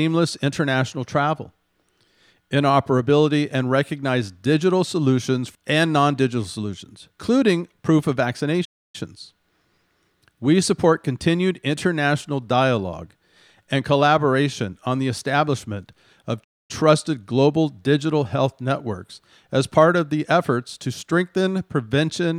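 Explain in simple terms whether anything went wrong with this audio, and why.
The speech cuts out twice: at 8.64 s it falls silent for about 0.29 s, and at 16.43 s for about 0.25 s, then carries on. Each gap is a playback stall. The player likely ran short of audio data or was briefly held up by other work on the device, so nothing reached the speakers until it caught up and resumed.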